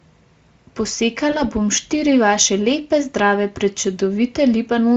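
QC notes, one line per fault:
1.31–1.46 s, VoIP packet loss concealed by the speech codec. A short stretch of speech just before "bom štiri vaše lepe" turns briefly buzzy or noisy and weak, then recovers. The gap fits a single lost 20 ms frame. The decoder filled it by repeating its last pitch and filter while lowering the level. Each frame builds on the one before, so the weakened, smeared sound lingers for about 150 ms in total. The surrounding Speex-coded speech carries little audible codec damage.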